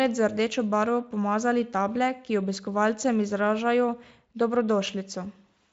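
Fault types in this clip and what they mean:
There are no fault types in this clip.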